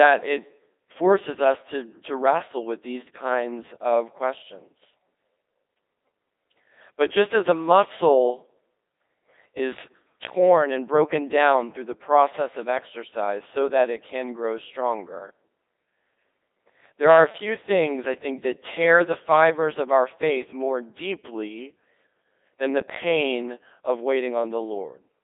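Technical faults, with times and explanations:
Throughout, Codec 2 vocoder: the speech is resynthesised from sine waves using only pitch, voicing, energy and envelope, which fits about 2.4 kbit/s and gives a heavily robotic buzz. A spectrogram shows smooth harmonic stripes within 300 Hz–3.7 kHz, blank above 3.8 kHz.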